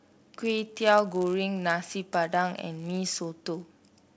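Resampler restarted on every block, throughout the speech: conversion from 48 kHz to 16 kHz was done block by block in 10 ms pieces, each edge computed without its true neighbours. The resulting edge errors form a 100 Hz buzz riding on the speech, present only while signal is there.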